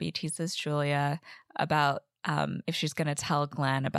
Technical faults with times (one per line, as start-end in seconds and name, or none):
none